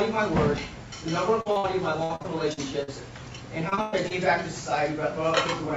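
At 1.41 to 1.47 s and again at 1.51 to 1.58 s, short concealed packet loss: about 40 ms of audio each time failed to reach the decoder, and the receiver extended the preceding sound to bridge it, leaving two brief smears with detail lost.

Straight after, from 1.58 to 1.66 s, a burst of packet loss drops about 60 ms in a row. Concealment stretches the last sound and fades it into a held buzz or dying hiss, then the audio resumes past the missing stretch.

From 2.03 to 2.89 s, repeated packet loss (robotic sound) sets in. Five separate gaps, the longest 61 ms, are each patched by continuing the previous sound, about a quarter of that span in all. The result is choppy and broken up.

A second stretch of repeated packet loss runs from 3.69 to 4.12 s. Four gaps, one as long as 112 ms, leave nearly 40 percent of the span synthesised, so the robotic chopping is denser here, all within the call path's 8 kHz bandwidth.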